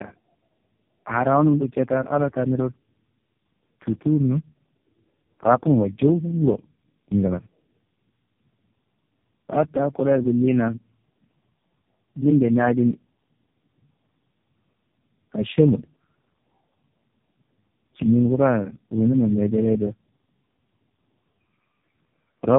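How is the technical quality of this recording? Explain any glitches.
The quality is poor, with one fault running through the whole recording. Tandem speech coding, throughout: the speech was decoded and re-encoded at each network border, likely three low-rate speech codecs in a row, so errors compounded. It sounds rough, muffled and warbly, with nothing above 3.7 kHz.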